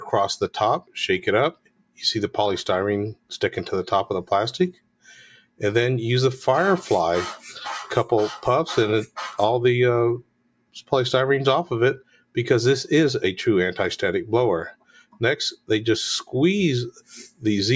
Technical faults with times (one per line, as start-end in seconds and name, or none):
0.00-17.76 noise suppressor applied to music or sounds
0.81-0.96 sound cut by the noise suppressor
1.52-2.01 sound cut by the noise suppressor
3.14-3.34 sound cut by the noise suppressor
4.72-5.61 sound cut by the noise suppressor
10.22-10.92 sound cut by the noise suppressor
11.99-12.36 sound cut by the noise suppressor
14.72-15.70 sound cut by the noise suppressor
16.91-17.44 sound cut by the noise suppressor